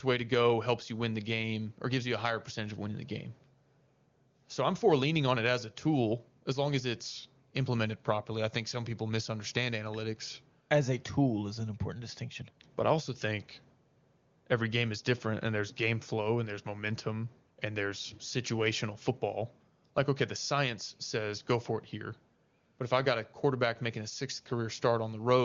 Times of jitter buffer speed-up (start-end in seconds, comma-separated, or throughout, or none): none